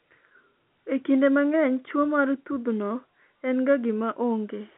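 No faults can be heard in this telephone speech.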